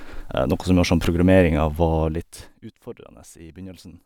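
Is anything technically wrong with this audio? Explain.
Yes. Zipper noise from 2.04 to 2.6 s: the speech is turned down about 20 dB in unsmoothed 2 dB steps, around 30 per second, producing a rapid ticking.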